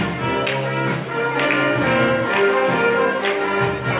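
No technical faults can be heard anywhere in the audio.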